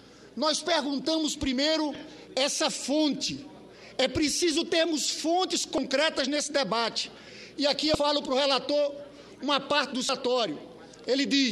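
The audio carries four short glitches from damaged data in a compressed stream: a brief blip at 1.95 s, then slightly longer glitches from 5.75 to 5.78 s, 7.92 to 7.95 s and 10.06 to 10.09 s, each about 30 ms. Corrupted bytes in the encoded stream cause the decoder to misread or discard the affected frames and lose sync until it locks onto the next valid frame header, producing these artefacts.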